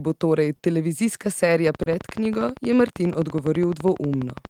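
Speech with small, uneven timing hiccups all the way through, a faint unsteadiness in pacing that comes from clock drift between sender and receiver: the sender's clock runs roughly 2 percent slow, so the receiver's buffer keeps draining and is repeatedly patched. Two brief holds occur, at 0.56 to 0.62 s and again at 1.83 to 1.89 s, where a sound is drawn out with a slight buzz or dip. Each is a short stall from a late packet: the buffer ran dry, the receiver stretched the last sound to fill 30 ms until the packet arrived, then resumed without losing anything. From 1.67 s to the end, a train of clicks ticks over the speech and the pauses alike at a regular 12.6 per second, peaking a few decibels above the speech, likely from interference by nearby equipment or a faulty connection or power supply. Between 3.04 and 4.09 s come repeated timing corrections: the receiver repeats short slices to keep pace with the slow sender, playing that stretch at about 95 percent speed and adding around 50 ms in total.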